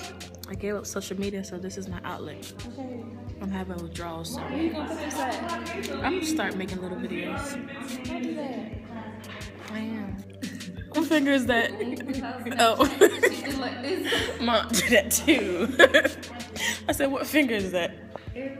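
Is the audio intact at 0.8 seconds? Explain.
Yes, the audio is intact at 0.8 seconds, with no fault at that moment.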